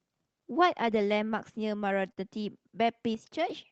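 Throughout the speech there is clock drift between sender and receiver: the sender's clock runs roughly 3% slow, so the receiver's jitter buffer keeps draining. From 0.12 to 1.89 s, repeated timing corrections stretch the audio to about 97% speed, adding around 50 ms in small, unevenly spaced edits. From 2.12 to 2.20 s, a short stall from a late packet leaves the buffer empty; the receiver holds the last sound for 51 ms, so nothing is lost but a syllable drags with a slight buzz or dip. From 3.15 to 3.49 s, the level drops by about 6 dB at a single step, speech and background together, likely a sudden gain jump applied without a ramp.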